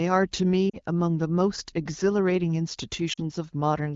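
Speech carried over AMR wideband (HD Voice), with lost AMR speech frames at 0.69–0.76 s and 3.13–3.20 s. Each 40 ms gap, which fits two missing frames, is concealed by the decoder stretching the last good sound with fading gain. That gives a brief fade to near silence rather than a hard click.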